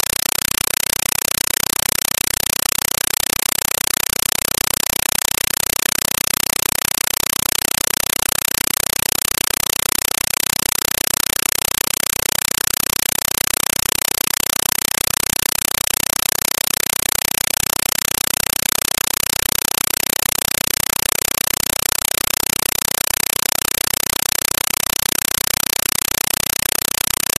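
Compressed stream played as audio, throughout: an AC-3 bitstream was treated as ordinary samples instead of being decoded. Each frame comes out as a 5.33 ms noise burst then silence, 31.25 times a second, which fits a 256 kbps stream. The result is loud, chattering static in place of the speech.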